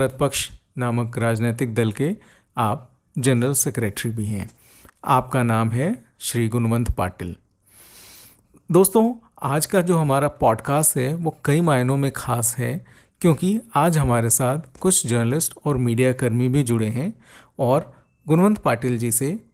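Nothing stood out as a technical fault on listening to this speech recording.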